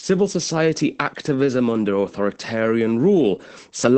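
From start to finish the speech carries plainly audible Opus voice compression. Nothing survives above about 8.7 kHz, which fits the wideband SILK linear-prediction mode, and the coarse coding of the excitation points to a bitrate near 12 kbps. The voice sounds muffled, hoarse and somewhat robotic. A spectrogram shows a flat ceiling at 8.7 kHz with empty space above it, and the codec works in 20 ms frames.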